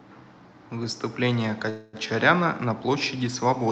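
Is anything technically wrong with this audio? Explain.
Yes. From 1.69 to 2.08 s the speech stalls in what sounds like a call audio freeze, most likely packets held up in transit so the jitter buffer ran dry. For roughly a quarter of a second the receiver stretches the last sound into a fading buzz or hiss, then the speech picks up exactly where it stopped. Unlike packet loss, nothing is skipped. A gap is inserted and everything after it arrives about 240 ms later. The call codec's band limit near 8 kHz applies throughout.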